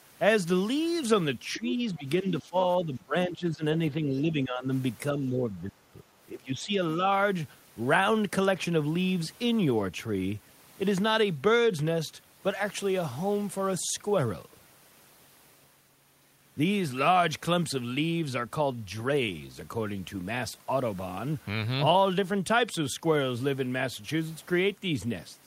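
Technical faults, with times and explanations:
1.57–2.56 s, 2.78–3.65 s, 3.90–4.70 s, 5.12–5.98 s and 6.32–6.80 s: speech suppressed in double talk. The speech repeatedly sinks in level for around half a second or more. Drops reach about 10 to 20 dB, deepest in the last run. The echo canceller likely mistook overlapping talk for echo and turned the speech down.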